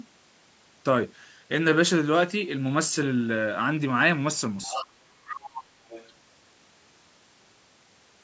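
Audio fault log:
4.62–4.85 s, 5.25–5.63 s, 5.89–6.10 s: other side's voice leaking through. Faint second-talker fragments sit well beneath the main speech, each burst quieter than the last. This is likely far-end audio from the loudspeaker that the echo canceller only partly removed.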